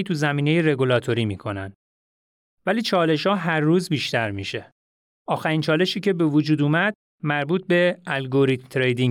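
No technical faults can be heard anywhere in the speech recording, and the signal stays steady and continuous throughout.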